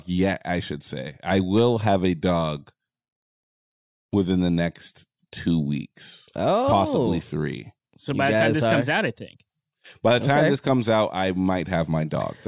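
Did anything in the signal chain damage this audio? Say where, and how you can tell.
No, nothing in the signal chain damaged this audio.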